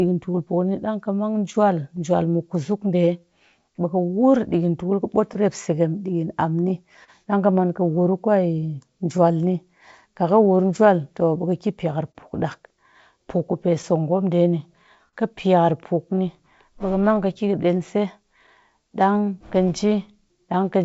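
Tiny ticks and smeared syllables appear between 0.26 and 1.99 s. These are scattered short gaps: about five packets arrived late or went missing, and the receiver filled each hole, the longest around 10 ms, by extending the preceding sound, roughly 40 ms in all.

From 0.63 s to 20.55 s the pacing wobbles slightly, with faint hiccups at uneven spacing. These are repeated timing corrections: the receiver keeps inserting short repeated pieces, about 200 ms in total, so playback runs at roughly 99% speed to stay in step.

Between 4.50 and 7.10 s the speech picks up another cluster of scattered short gaps, with around four concealed holes totalling about 70 ms. The longest, near 40 ms, is long enough to be heard as a brief smear, because the last sound was stretched across it.

From 9.17 to 18.93 s about ten more scattered short gaps appear, adding up to roughly 150 ms of patched audio. Each sounds like a small tick or momentary blur, up to around 40 ms, where the receiver continued the previous sound over a late or missing packet.

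Underneath all of this runs clock drift between sender and receiver. The sender's clock is roughly 2% slow, so the jitter buffer keeps draining and must be topped up with repeated material, which produces the recurring uneven hiccups. The call audio, carried by a G.722-type codec, has nothing above 8 kHz.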